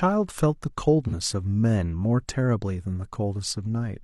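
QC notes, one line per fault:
1.07 to 1.14 s, AAC frame loss with concealment: a brief smeared, noisy patch of about 43 ms in the speech, which fits a single lost frame. The decoder rebuilt the gap from the last good spectrum with altered phase, so detail blurs instead of dropping out.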